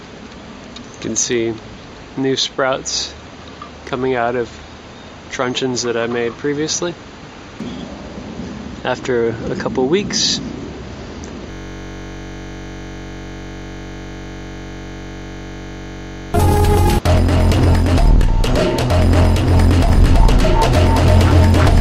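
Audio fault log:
11.51–16.34 s, system hang loop: one 21.33 ms slice of audio repeats exactly, about 227 times, which fits a 1024-sample ring buffer cycling while the system froze. At 46.9 Hz the repeats fuse into a steady buzz rather than a stutter, and there is no echo-like decay between passes.
19.89 s to end, doubled audio track: a full-band copy runs roughly 300 ms behind, about 5 dB quieter, likely from a second, slower capture path. It differs from room echo or reverb because it has no decay or tonal colouring and cuts in abruptly.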